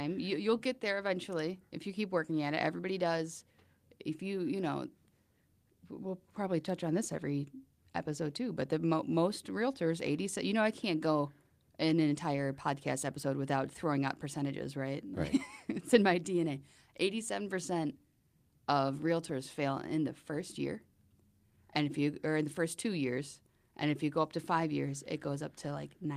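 Nothing in this speech recording stands out as a technical fault; it runs its whole course without a single glitch, dropout or odd artefact to point to.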